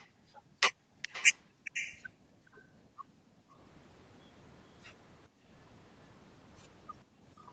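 Speech with a faint delayed copy trailing about 418 ms behind at 0–0.06 s, 1.02–1.37 s and 1.65–2.02 s, rising from roughly −35 dB to around −15 dB, likely an echo leak from a far-end loudspeaker. The room tone also drops out through the echo canceller's gating at 0.06–1.02 s, 2.1–3.59 s, 5.28–5.49 s and 7.04–7.25 s, dipping by about 18 to 30 dB each time.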